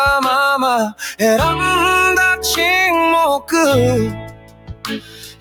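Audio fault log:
Throughout: noise suppressor applied to music or sounds. A speech-tuned suppressor was left running, so it keeps deciding that steady parts of the sound are noise and pulling them down, with a swing of roughly 15 dB between what it passes and what it ducks. Onsets get through fine, but anything held or ringing sinks right after, which gives the whole thing a pumping, fluttery feel and thins out the tails.
4.11 to 5.40 s: sound cut by the noise suppressor. Over this last stretch the suppressor really clamps down, with the level dropping by as much as about 18 dB. It misreads the sound here as background noise, so it gets turned down harder than anything earlier.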